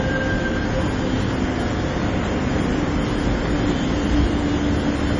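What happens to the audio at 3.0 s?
At 3.0 s the sound carries the heavy damage present throughout the clip, likely from MP3 compression at a very low bitrate, around 32 kbps. Nothing sounds above 10.8 kHz, and weak frequency lines drop in and out between frames, giving a watery, swirling texture with smeared attacks.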